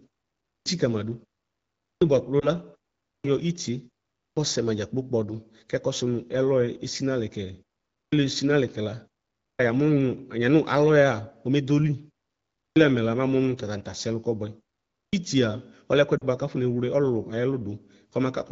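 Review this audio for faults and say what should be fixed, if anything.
Eight onsets come in clipped after a pause, at 0.41, 1.78, 2.99, 4.11, 7.88, 9.33, 12.53 and 14.88 s. Each time roughly a quarter second, 230 to 260 ms, of the start of speech is swallowed, so the sound jumps abruptly out of silence. This happens even after pauses as short as 0.3 s, which points to an output device that sleeps in silence and needs time to wake or relock. Keep the output path active through silence, or disable its power saving, so it never has to wake up.

Lost AMR speech frames cause brief dips. At 2.39 s a short warble of about 20 ms fits a single frame that failed its checksum. At 16.18 s a slightly longer dip of about 40 ms fits two consecutive frames. In each case the decoder fills the gap by reusing the last good pitch and vocal-tract settings at falling gain. Protect the radio link better, for example with stronger channel coding or a more robust mode, so fewer frames arrive corrupted.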